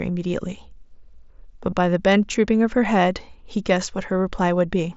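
At 1.71 s there's a brief concealed Bluetooth headset packet loss: about 15 ms of audio went missing and got patched from the preceding waveform.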